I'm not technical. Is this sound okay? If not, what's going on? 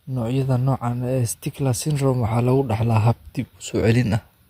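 Yes, nothing technically wrong can be heard anywhere in this speech recording.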